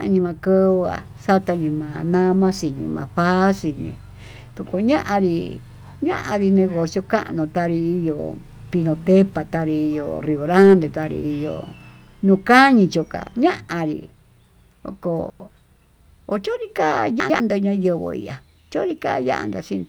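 Chunks out of order occur in this speech clip at 15.3 to 15.5 s and again at 17.2 to 17.4 s. In each case a 100 ms chunk plays one slot late, swapped with its neighbour. Nothing is lost, but the jumbled order leaves hard joins that briefly garble the speech.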